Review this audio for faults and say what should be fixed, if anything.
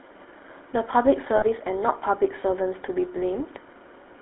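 GSM full-rate codec damage runs through the whole clip. The speech is squeezed into a telephone band of about 300 Hz to 3.4 kHz and carries a buzzy, gravelly roughness. The codec rebuilds each sound from a vocal-tract model driven by coarse pulse excitation, which fits the 13 kbps GSM full-rate coder.

Lost GSM frames occur from 1.36 to 1.44 s. The decoder repeats the parameters of the last good frame, so the sound turns into a brief rough, metallic ring. The gap is about 60 ms, which fits three missing 20 ms frames.

Prevention: use a wideband codec at a higher bitrate and protect the link against frame loss with better error correction or more reliable transport.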